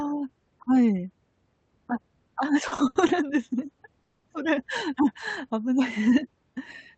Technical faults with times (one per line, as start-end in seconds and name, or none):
2.67-3.10 repeated stalls (stutter)
4.02-4.26 call audio freeze